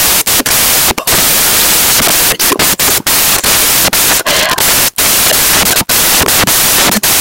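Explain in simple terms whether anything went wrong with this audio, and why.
Something went wrong in how the file was read: the samples were built from the wrong bytes, so the tiny, fast-changing detail in each value became the main part. From start to finish the speech comes with loud, harsh hiss.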